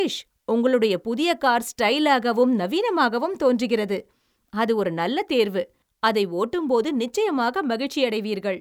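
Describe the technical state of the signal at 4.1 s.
At 4.1 s the speech signal is intact, with no audible dropout, distortion, glitch or other technical fault.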